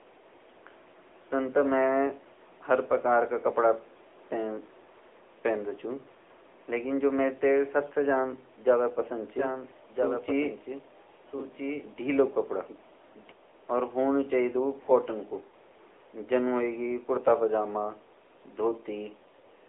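Throughout, the speech carries AMR narrowband mobile codec damage. Nothing passes outside roughly 300 Hz to 3.6 kHz, and the pulse-driven vocal tract model leaves a plainly buzzy, synthetic edge that fits the 10.2 kbps mode. Unlike simple telephone band-limiting, this adds that coded, artificial texture.

From 15.50 to 15.53 s, one AMR speech frame is lost, about 20 ms. The decoder fills the gap by repeating the last good pitch and vocal-tract settings at reduced gain, giving a brief dip or warble rather than the hard silence or click of a dropout.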